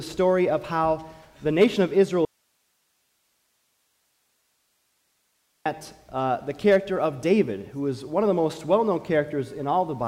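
The wanted signal was likely lost upstream while the path after the break stayed live, giving an audio dropout to a faint residue from 2.25 to 5.66 s. The sound cuts abruptly, leaving about 3.4 s of plain hiss, roughly 45 dB below normal, before snapping back.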